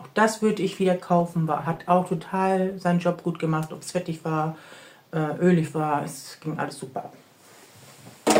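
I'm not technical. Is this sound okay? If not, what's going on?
No. From 1.20 to 4.55 s there is a call bitrate drop. The connection squeezed the sound into far less data, so it turns rough and muffled, worst for about one second, then clears. Unlike a dropout, the sound never actually stops.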